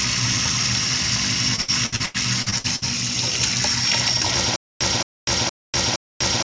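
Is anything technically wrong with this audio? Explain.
Yes, there are two faults. The sound arrives through a call path whose spectrum stops at 8 kHz, which fits a wideband call codec such as G.722.

From 1.56 to 2.84 s there is repeated packet loss, giving a robotic sound. Nine holes open in quick succession, the longest 86 ms, and each is patched by extending the preceding sound, so about a third of this stretch is concealment. It sounds choppy, with pieces missing. On a spectrogram, smeared, frozen-looking blocks alternate with normal texture. The waveform shows repeated, unnaturally regular segments.

From 4.56 s to the end there is a stutter with silent gaps. The same 220 ms fragment plays four times, each followed by about 246 ms of digital silence, so it repeats every 466 ms. This is likely a stalled stream replaying its last buffered fragment at each retry and then running empty, and the audio that should have filled that time is lost. 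On the waveform, identical bursts alternate with flat, near-silent stretches. The spectrogram shows matching blocks separated by blank columns.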